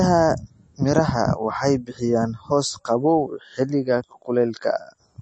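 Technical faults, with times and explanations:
Throughout, MP3 compression: nothing is present above 8.4 kHz, and a plainly audible watery, swirling texture comes from weak frequency lines switching on and off between frames, likely a bit-starved MP3 encode consistent with about 32 kbps.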